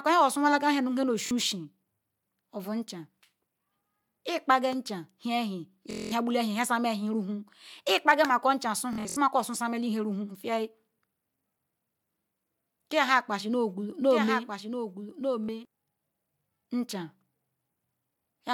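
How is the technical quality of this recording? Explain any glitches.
The recording has two kinds of glitches: wireless dropouts and a brief doubled passage.

Bluetooth stutter occurs at 1.26 s, from 5.91 to 6.12 s, from 8.93 to 9.17 s, and at 15.47 s. Audio data arrived late or not at all, so the receiver replayed its last short slice. The first and last events last about 46 ms and give a quick buzz. At 5.91 s about 209 ms is lost, a longer machine-gun stutter. At 8.93 s the losses are scattered, with the longest run about 70 ms. Speech resumes further on, as if it had kept playing.

A doubled audio track runs from 14.09 to 15.65 s. The same speech is heard a second time, roughly a second late and a few dB quieter. The repeat is a clean full-band copy with no room colour. It starts and stops abruptly. A second, slower capture path is the likely cause.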